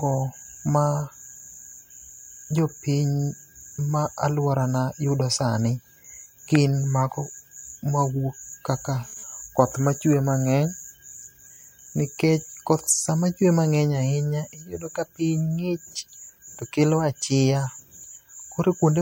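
From 8.92 to 9.24 s, a nearby 2G handset's radio bursts leak into the audio path, where a circuit rectifies the pulses and turns them into audible signal. The result is GSM phone buzz: a hard, raspy tone at about 217 Hz, rich in harmonics and unrelated to the speech, sitting about 32 dB below it. It lasts only about a third of a second, consistent with a brief data transfer rather than a call.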